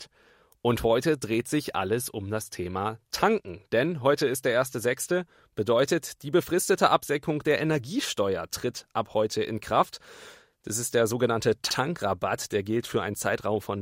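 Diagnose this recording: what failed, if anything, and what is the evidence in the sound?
Repeated frames at the codec or storage stage: just after "ist der sogenannte", the 64 ms stretch at 11.70 to 11.76 s plays twice, which fits two compressed frames duplicated. Unlike a dropout or buffer underrun, nothing goes missing; an exact copy stutters and lengthens the audio by 64 ms.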